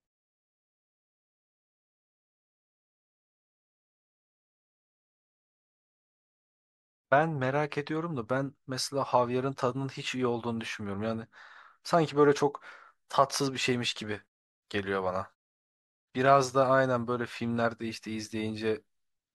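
No technical faults can be heard anywhere in this speech clip.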